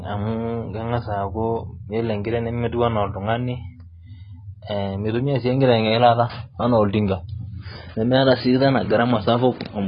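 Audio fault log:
Throughout, AAC compression: the speech sounds dull and smeared, with nothing above 5 kHz and a warbling, fizzy texture on sibilants. The damage is heavy. It is likely an AAC-LC encode at a very low bitrate, around 16 kbps, starving the spectrum.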